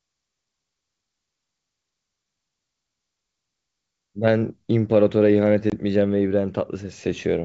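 At about 5.70 s there's packet loss on an ADPCM call. The speech drops into a hard-edged silent hole of about 20 ms, which fits roughly one lost packet. Because ADPCM codes each sample as a change from a prediction, the receiving decoder's predictor and step size drift out of step with the sender's during the gap. When the speech comes back it sounds a bit roughened until things realign around 5.78 s. The G.722 wideband coding around it stays clear.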